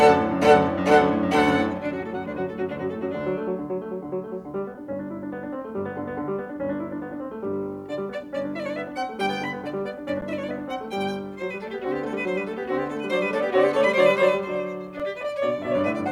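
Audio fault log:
10.21 s and 15.0 s: underrun with held sample. The music freezes flat at its last level rather than dropping to zero, for 10.7 ms and then 2.7 ms, so each stops with little or no onset click, unlike a true dropout. Roughly 10 ms and 3 ms of audio are skipped. The lengths fit 512- and 128-sample buffers.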